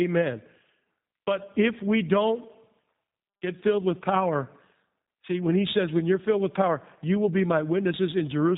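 Throughout, the speech carries plainly audible G.729 codec damage: rough and synthetic from sparse pulse excitation, with nothing above 3.8 kHz. That fits an 8 kbit/s stream.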